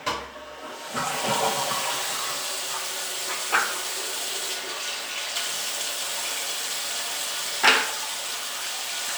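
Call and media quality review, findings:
No faults detected in audio.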